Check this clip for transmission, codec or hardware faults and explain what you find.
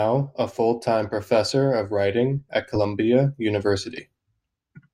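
Two short dropouts from compressed frames skipped, at 2.75–2.80 s and 3.97–4.01 s. Each time the decoder never played a couple of frames, lost from the stream or rejected as corrupt, so the speech jumps ahead by around 40 ms, which fits two 20 ms frames.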